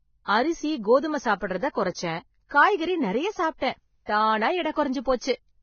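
Heavy codec damage runs through this speech recording: nothing is present above 6.6 kHz, and the remaining treble is hissy and grainy. That points to Vorbis compression at a low bitrate, likely around 16 kbps. A spectrogram shows a flat ceiling at 6.6 kHz with speckled noise replacing fine harmonic detail. Pre-echo smears three attacks: at 1.72 to 1.75 s, 3.58 to 3.62 s and 5.00 to 5.06 s, a short hiss spreads 32, 41 and 56 ms ahead of each onset. This happens because quantisation noise fills the whole transform block. On a waveform, a low fuzzy ramp appears before each sharp rise.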